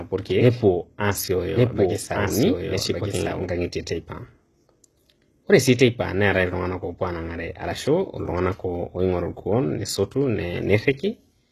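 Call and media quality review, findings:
Treble gritty and metallic, s sounds lispy, whole clip. Likely HE-AAC compression, consistent with roughly 16 kbps. Upper band rebuilt by copying lower bands upward, so harmonics misalign. Nothing above 12.4 kHz.

Doubled audio track, 0 to 3.44 s, already present at start. Full-band copy, about 5 dB quieter, trailing about a second behind. No decay or room colour. Stops abruptly at 3.44 s. Likely a second, slower capture path mixed in.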